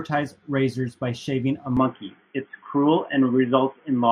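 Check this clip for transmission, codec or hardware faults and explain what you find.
One fault appears. Input likely switched to a poorer device at 1.77 s: the band stops at 3.4 kHz with no gap, so the speech turns dull and boxy, shifts in level, and gains faint new background noise.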